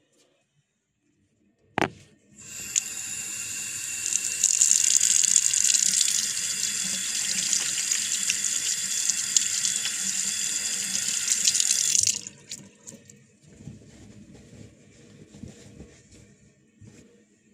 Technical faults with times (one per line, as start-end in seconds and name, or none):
0.00-2.00 de-emphasis applied wrongly